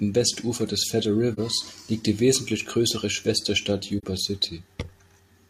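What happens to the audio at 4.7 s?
Nothing goes wrong at 4.7 s: the speech carries on intact through that moment, with no dropout, click, distortion or other audible fault.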